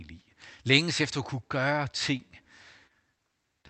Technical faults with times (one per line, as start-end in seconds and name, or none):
2.17-2.21 short concealed packet loss
2.87-2.92 short concealed packet loss
3.62-3.66 short concealed packet loss